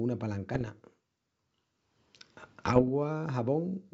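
From 0.54 to 0.69 s, and again from 2.59 to 2.89 s, bit errors on an ADPCM link break into the speech. Under one percent of bits flip. Each flip derails the decoder's step size and predictor, so sharp pops trail into rough bursts with brief level jumps.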